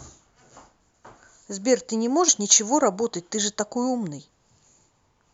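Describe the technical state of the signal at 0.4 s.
At 0.4 s the signal is intact, with no audible technical fault at that point.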